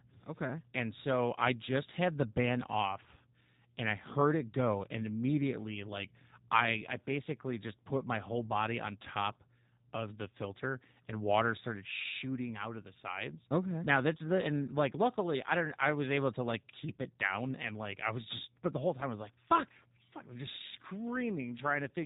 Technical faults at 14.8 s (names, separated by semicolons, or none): G.729 codec